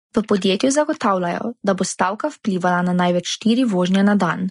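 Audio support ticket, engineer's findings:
Low-bitrate audio saved at a high bitrate, whole clip: source likely passed through a low-rate lossy encoder before a high-rate MP3 stage. Speech has nothing above 10.6 kHz, with a dull top and first-pass codec artefacts that re-encoding cannot restore.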